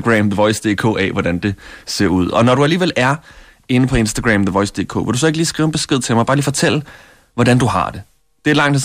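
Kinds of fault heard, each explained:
No technical faults can be heard in this speech recording. Nothing in the audio signals a problem with how it was captured, processed or played back.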